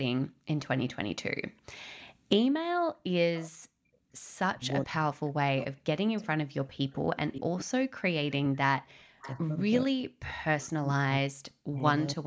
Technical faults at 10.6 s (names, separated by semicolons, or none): speech suppressed in double talk; echo leak